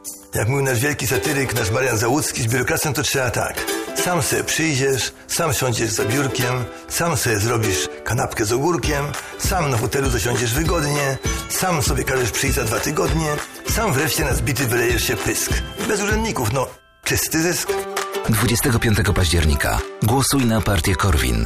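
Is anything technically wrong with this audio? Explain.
No, nothing is technically wrong with this audio. I hear no fault at any point in the clip.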